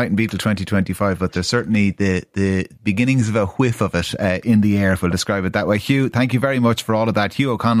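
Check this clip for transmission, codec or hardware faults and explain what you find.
No faults are audible anywhere in this speech recording.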